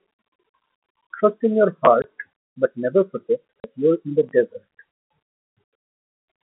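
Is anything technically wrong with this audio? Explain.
Yes. This telephone-band speech, carried over what sounds like G.711 with its 200 Hz to 3.4 kHz line band, has two kinds of timing fault.

Chunks out of order occur at 1.85 to 1.87 s and again at 4.29 to 4.32 s. A 10 ms piece of audio was delivered late and played after the material that should have followed it: one chunk late in the first case, two in the second. No audio is missing, but the sequence is scrambled, leaving hard joins at each misplaced boundary. Each event is heard as a brief jumbled stutter.

Packet loss filled with silence occurs at 2.02 to 2.04 s and at 3.60 to 3.64 s. The receiver had no audio for these spans and inserted silence rather than concealing the loss. The first hole is 20 ms and the second is 40 ms, which fits one and then two consecutive 20 ms packets going missing. The speech is abruptly chopped, with hard edges where the signal drops out and resumes.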